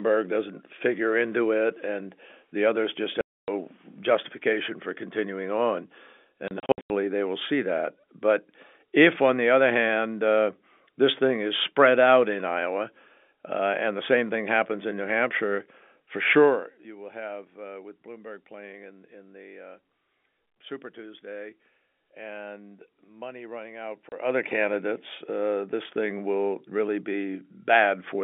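Packet loss filled with silence punches three holes in the speech. After "and the others just", 3.21 to 3.48 s goes silent. From 6.48 to 6.9 s, before "they will see that", short gaps are scattered. At 24.09 s, one 30 ms hole. The gaps fit 30 ms packets. Their edges are hard.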